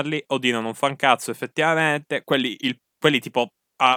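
No technical faults can be heard in the speech. Nothing in the recording calls for a time mark or an explanation.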